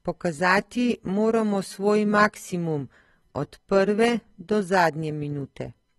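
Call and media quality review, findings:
Dull, smeared speech throughout, nothing above 12.4 kHz, warbly sibilants; likely AAC compression, low-bitrate AAC-LC (sounds like around 32 kbps) starving the upper bands.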